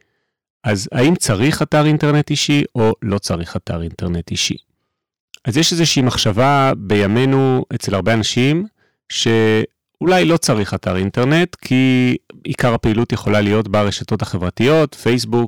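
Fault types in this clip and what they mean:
Hard clipping: speech is driven about 5 dB past the limit, flattening roughly 7% of samples; waveform peaks look squared off, spectrogram shows harmonics smeared upward.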